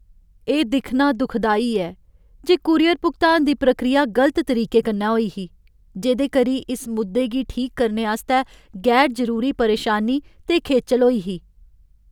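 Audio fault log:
No fault can be heard anywhere in the speech. Nothing here calls for an entry in the log.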